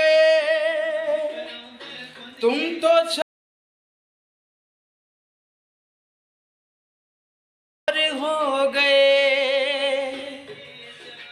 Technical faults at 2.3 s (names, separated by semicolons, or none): none